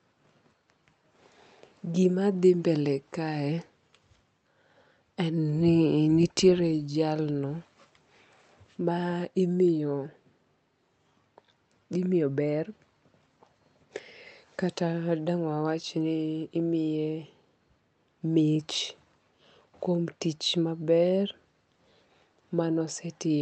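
No technical faults are audible.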